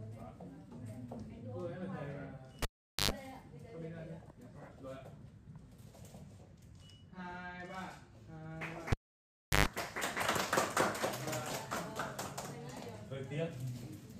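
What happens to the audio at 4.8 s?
Nothing goes wrong at 4.8 s; the audio plays through that moment intact, with no dropout, click, distortion or other fault.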